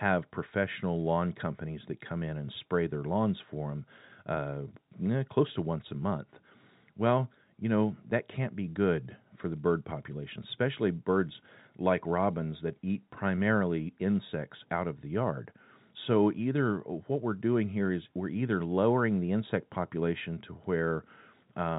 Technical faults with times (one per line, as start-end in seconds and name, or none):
none